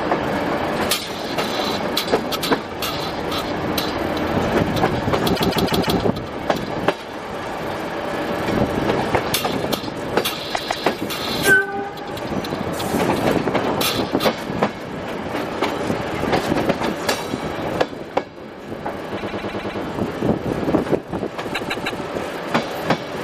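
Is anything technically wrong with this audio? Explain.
Yes. Repeated frames occur at 5.34–5.97 s, 10.54–10.86 s, 19.16–19.79 s and 21.54–22.01 s. Each time, a short run of compressed audio (157 ms, or 105 ms at 19.16 s) is decoded again and again, so the sound stutters in place and the clip grows by up to 0.63 s per event.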